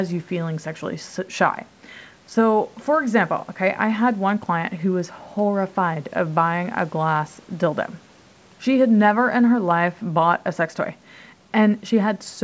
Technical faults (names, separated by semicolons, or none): none